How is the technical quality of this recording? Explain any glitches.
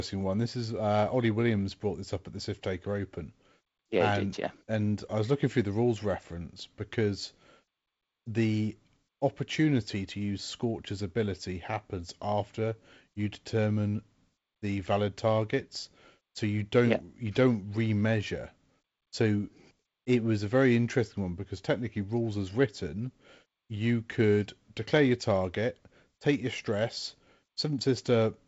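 No glitches are audible here.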